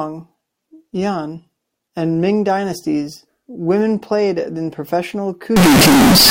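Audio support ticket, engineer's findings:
Float read as integer, 5.56–6.31 s: speech becomes very loud, harsh, near-square at an almost fixed high level, with noise level equal to speech. Likely 32-bit float samples decoded as 32-bit integer.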